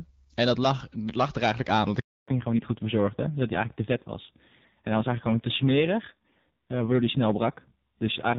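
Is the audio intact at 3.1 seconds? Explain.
No. At 3.1 seconds the audio is inside a fallback to narrowband that begins at 2.28 s and runs to the end. The call has dropped from HD Voice to an older narrowband codec, so nothing above 4 kHz passes and the voice turns duller and rougher. The roughness fits a drop from a wideband rate near 12.65 kbit/s to a narrowband rate near 5.9 kbit/s. Unlike a plain low-pass filter, the cut arrives suddenly mid-clip and brings coding roughness with it.

Hard clipping is also present at this moment, as it is throughout the clip. The signal is overdriven by about 8 dB, so a few percent of samples have their peaks cut flat. Those flat tops add high harmonics, which are heard as crackle on peaks. This fuzz follows loud moments, whereas the codec roughness stays steady whatever the level.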